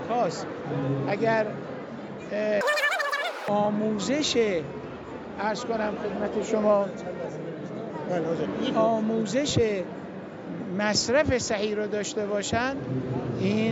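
From 2.61 to 3.48 s the audio plays back with a wrong sample rate. It runs about 2.76 times too fast and rises 17.6 semitones, a ratio that fits 16 kHz material played out at 44.1 kHz without conversion. A pitch shifter would raise the pitch while keeping the timing, and a time-stretch would speed things up at the original pitch. Here speed and pitch jump together by the same factor, which points to the playback rate itself.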